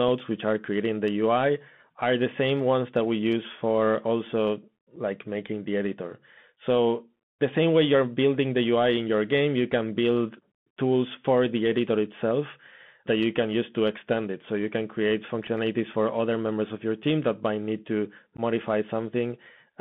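From the start and throughout, the speech carries the sound of a Bluetooth CVSD headset codec, plainly audible. Each sample is coded as a single up-or-down step whose size adapts, which fits a 64 kbps CVSD link. Loud high-frequency sounds outrun that step and distort, sibilants turn scratchy, and a granular hiss sits under the speech. On a spectrogram, energy is confined to roughly 150 Hz to 3.5 kHz, with a grainy noise floor across that band.

At 4.96 s comes the first unconcealed Bluetooth headset packet loss. About 7.5 ms of audio vanishes, which fits roughly two lost packets replaced by silence, and nothing smooths over the gap. A second loss at 15.47 s is shorter, about 3.8 ms, consistent with a single packet. The longest runs from 18.37 to 18.40 s, dropping about 15 ms, which points to around four packets. Each is heard as a short hole with abrupt edges, and the speech returns quieter for a moment as the codec's step size recovers. 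In the waveform these show as flat holes with abrupt edges. On a spectrogram they appear as thin vertical breaks.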